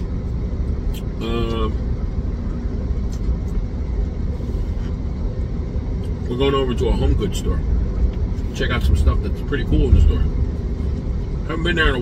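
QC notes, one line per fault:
No faults found. Nothing in the audio calls for a QC entry.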